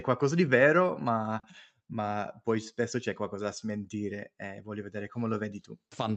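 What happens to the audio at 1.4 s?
At 1.39 to 1.46 s, just after "qualcosa di vero ma" and before "ma poi spesso c'è", there is a short stall from a late packet. A packet arrived late, the jitter buffer ran dry, and the receiver stretched the last sound by about 40 ms before resuming from the same point. Nothing is lost, but the sound hangs briefly with a slight buzz or dip. On a spectrogram the harmonics run flat and frozen; the waveform shows a repeated stretch.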